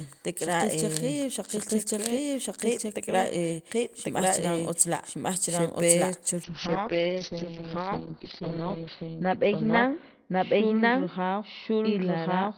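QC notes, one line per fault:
Throughout: doubled audio track. A full-band second copy of the speech runs about a second behind the original at roughly the same level. It has no decay or room colour. This is likely a second capture through a slower path, or an edit holding two out-of-step copies.
6.45 s to end: call bitrate drop. Just after "la' xe pe chu", the encoder falls from 32 kbps to 7 kbps, its lowest point for 2.25 s. The bandwidth narrows from 20 kHz to 6 kHz, so the speech turns coarse, watery and muffled.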